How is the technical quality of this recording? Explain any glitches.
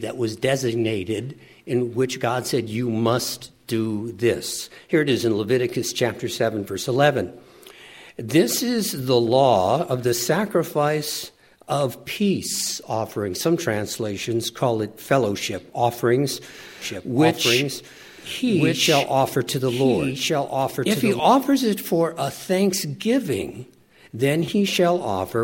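The recording has one glitch: a doubled audio track from 16.82 to 21.20 s. A second copy, around 5 dB quieter, trails about one and a half seconds behind with no reverb tail, starting and stopping abruptly, likely from a slower second capture path.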